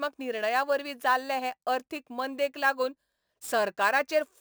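Throughout the speech, the rate was raised by holding each sample with no smoothing filter, likely from a 24 kHz source. This imaging from sample-and-hold upsampling mirrors the spectrum into 12 kHz to 24 kHz, about 22 dB down, a metallic fizz tracking the speech.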